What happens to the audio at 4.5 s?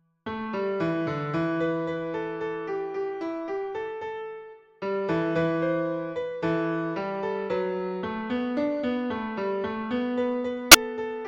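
Nothing goes wrong at 4.5 s: the audio plays through that moment without any dropout, click, distortion or other audible fault.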